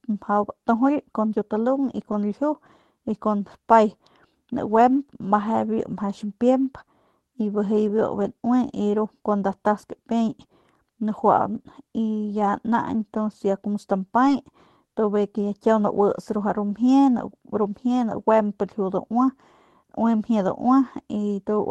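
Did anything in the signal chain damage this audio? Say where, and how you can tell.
Yes, at the network stage. Right after "ya como", from about 14.25 to 14.31 s, there's a lost packet rebuilt from error correction. There's no gap or dropout, but that stretch turns briefly rougher and grainier than the Opus coding on either side. It's roughly 40 ms of patched audio, which sounds like two separate 20 ms frames. The packets went missing in transit, and the decoder filled in from the low-bitrate backup copies carried in the next packets.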